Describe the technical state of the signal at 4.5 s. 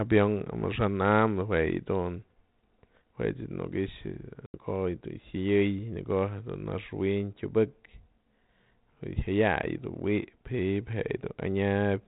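Packet loss on an ADPCM call hits at 4.46 to 4.55 s: about 80 ms, a few packets, goes missing and is filled with silence, leaving a hard-edged gap. The decoder's adaptive predictor and step size then no longer match the sender's, so the speech resumes disturbed before settling within some tens of milliseconds.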